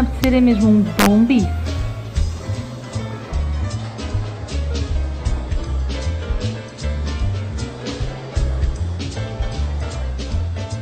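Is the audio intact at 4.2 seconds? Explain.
Yes, the audio is intact at 4.2 seconds, with no dropout, click, distortion or other fault at that point.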